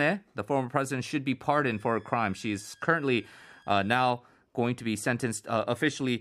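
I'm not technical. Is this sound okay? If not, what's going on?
No. From 1.71 to 4.02 s, after "former president should be" and until "going to be", a faint high whistle sits under the speech. This is a switching supply whistle: a switching power supply running in an audible burst mode or beating with another one. Unlike low, steady mains hum, its pitch wanders between about 1.6 and 1.7 kHz.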